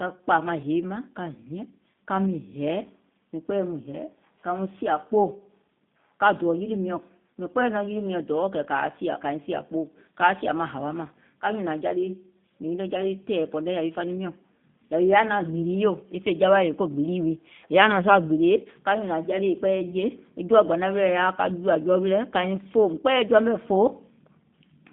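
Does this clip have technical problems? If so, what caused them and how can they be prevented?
Yes. G.729 codec damage throughout: speech rebuilt from a filter and sparse pulses sounds rough, with spectrogram energy confined to 150 Hz to 3.6 kHz, fitting 8 kbit/s G.729A. Using a wideband codec such as Opus or G.722 would prevent it.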